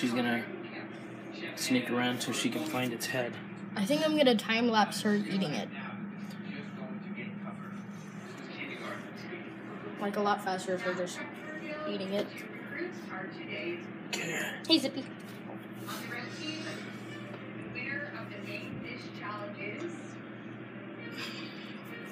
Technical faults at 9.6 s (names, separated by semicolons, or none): none